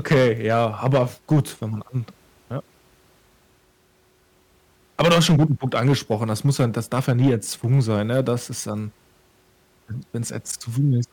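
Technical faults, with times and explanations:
0.11–1.40 s, 4.99–7.34 s, 7.71–8.33 s: hard clipping. The speech is overdriven about 12 dB, then about 4 dB before "ist ähm". Flattened peaks add harsh high harmonics.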